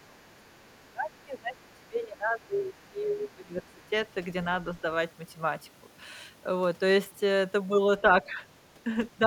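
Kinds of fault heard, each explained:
Other side's voice leaking through: The echo canceller likely failed to fully remove the far-end talker's voice, which the device's loudspeaker played into its own microphone. A faint second voice, roughly 35 to 40 dB below the main speech, comes through from the start to 0.83 s, again briefly from 2.74 to 2.89 s, and in a short scrap at 3.82 s. These leaks are fragments sitting quietly under the talker.
Speech suppressed in double talk: With both sides talking at once, the echo canceller likely could not tell the near talker from the loudspeaker echo, so it turned everything down together. From the start to 3.82 s the talker's voice dips, with the deepest drops reaching around 20 dB. The suppression covers roughly three seconds in total, leaving the speech uneven and partly swallowed in that opening stretch.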